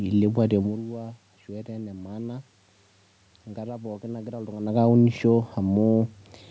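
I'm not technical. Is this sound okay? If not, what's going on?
Yes, there's nothing wrong with this recording.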